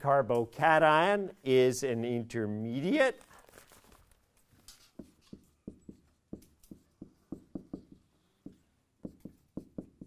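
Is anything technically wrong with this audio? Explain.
No, nothing technically wrong stood out on listening to this audio.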